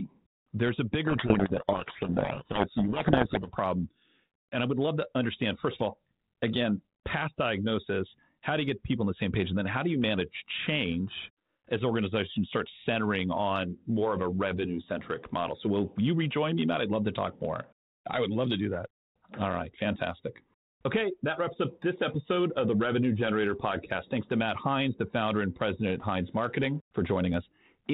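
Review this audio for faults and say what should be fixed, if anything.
From 1.1 to 3.49 s the speech is buried under harsh, grinding distortion. This is a codec payload misread. The decoder reads the bits of each G.726 code word in a different order from the sender, so every adaptive difference value decodes wrongly until the packing matches again. To prevent it, agree on and enforce the same G.726 bit-packing order at both ends before audio starts flowing.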